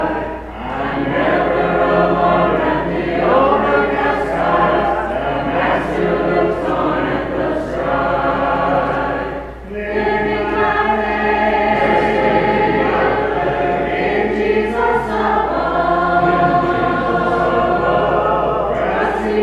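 Nothing goes wrong anywhere in this recording, with no dropouts, glitches or other faults to point to at any moment.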